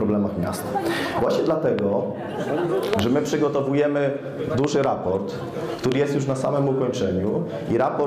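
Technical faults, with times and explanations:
1.79–1.81 s, 2.93–3.01 s, 4.64–4.86 s and 5.92–5.94 s, loud pop: sharp pops stand well above the sound, roughly 15 to 20 dB louder, while the audio carries on underneath. The first and last are single pops. The pairs at 2.93 s and 4.64 s come in quick succession, the second pair spread over about 0.2 s. Each is likely a sudden voltage step or pulse, from a plug, switch, static discharge or driver glitch, shaped into a brief click by the circuits after it.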